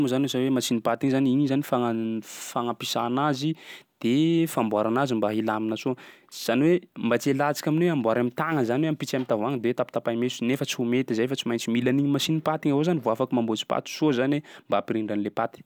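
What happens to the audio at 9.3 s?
Nothing goes wrong at 9.3 s; the speech there is intact, with no dropout, click or distortion.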